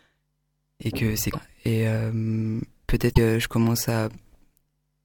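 At 1.32 to 1.35 s, after "et que c'est", and at 3.10 to 3.18 s, damaged data in the compressed stream makes the decoder lose sync. Each spot gives a brief glitch.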